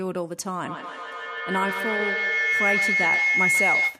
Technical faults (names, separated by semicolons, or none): feedback howl